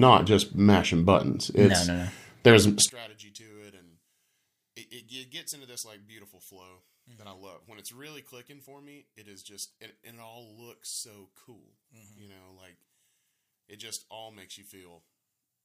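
From 2.89 s onward, speech sinks about 29 dB to a faint residue rather than silence: likely one channel inverted, cancelling in mono.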